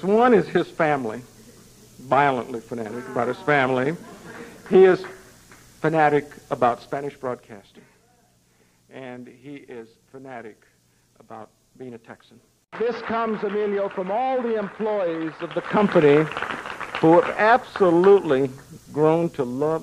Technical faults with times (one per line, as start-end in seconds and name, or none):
15.36-15.94 zipper noise